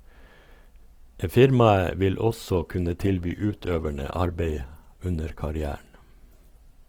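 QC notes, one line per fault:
2.25 to 6.88 s, adaptive stream at a lower bitrate: the speech abruptly changes in quality, with codec artefacts rising through to the end, which fits a switch from roughly 64 to 16 kbit/s Opus. Unlike a dropout, there is no gap at the change.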